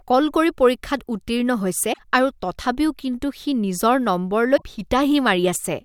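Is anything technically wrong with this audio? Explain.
Yes. Damaged data in a compressed stream occurs at 1.90 to 1.99 s and again at 4.53 to 4.63 s. Corrupted bytes make the decoder misread those frames and lose sync while hunting for the next valid header, producing a brief chirp, squawk, click or short hole in the speech each time.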